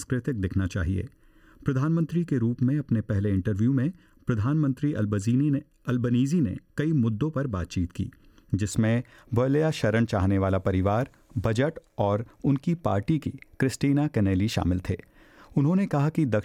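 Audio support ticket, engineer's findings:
Channel delay (comb filtering), 0.0 to 8.71 s. Hollow, phasey sound with fixed notches, first one around 700 Hz. Probable culprit is the stereo-to-mono fold-down. One channel runs late by a bit under a millisecond, so shared content cancels at evenly spaced frequencies.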